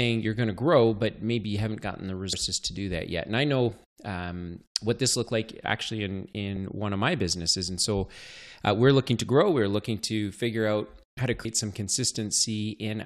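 Compressed frames skipped at 2.33 s, right after "you haven't gotten the" and before "to do that yet", and again at 11.44 s, just after "figure out how to". In each case whole blocks of the compressed audio never reach the output, whether missing from the file or rejected as damaged, so playback jumps forward. About 150 ms is lost at the first point and roughly 200 ms at the second. That suggests runs of about five and seven frames of around 26 ms each.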